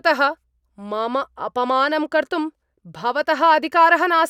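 No technical faults are audible.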